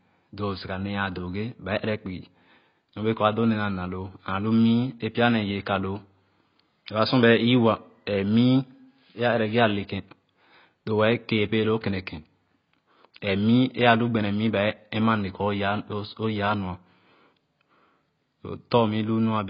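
From start to end the speech is dull, with nothing above 5.1 kHz and a warbling, smeared texture on sibilants. That points to heavy AAC compression, likely at around 16 kbps, unlike a clean low-pass.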